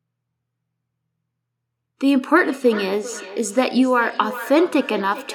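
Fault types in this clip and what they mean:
Feedback echo between two devices: from 2.39 s to the end, another device's playback is picked up again by the microphone, so the speech returns roughly every 400 ms, about 15 dB down; spectrograms show faint evenly spaced copies of each onset, waveforms smaller trailing bursts.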